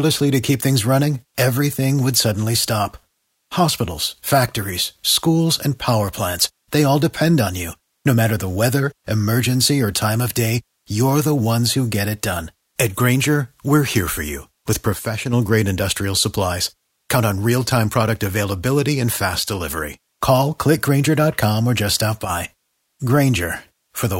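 At 14.93 to 15.33 s, just before "grade industrial supplies", the speech level falls abruptly by about 6 dB for 0.4 s and then snaps back. At 22.25 to 22.30 s, right after "or just stop", the same drop recurs for 50 ms. The likely cause is one channel dropping out, which halves the mono sum. The waveform shows a sharp-edged step in the envelope, and the spectrogram a uniform dimming across all frequencies.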